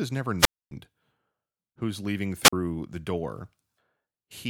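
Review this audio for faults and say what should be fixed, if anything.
The wireless microphone's radio signal fades until the receiver's squelch mutes it, a wireless microphone squelch dropout: hiss swells, then a 261 ms hole follows "is never" (0.38–0.71 s), and a 44 ms hole sits between "who's leaving" and "the door" (2.43–2.53 s). Prevent it with better antenna placement, a clear frequency and fresh transmitter batteries.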